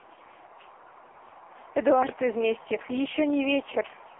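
Throughout, the speech carries AMR narrowband mobile codec damage. Nothing above 3.5 kHz survives. Heavy buzzy, synthetic coloration fits a very low bitrate, near 5 kbps.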